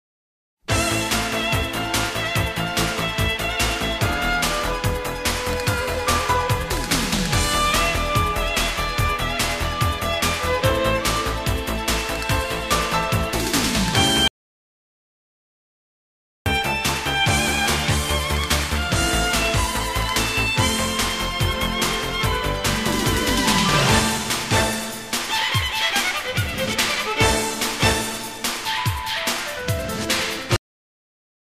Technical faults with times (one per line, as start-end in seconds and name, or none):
14.28-16.46 audio dropout to silence
30.56-31.58 cut-off end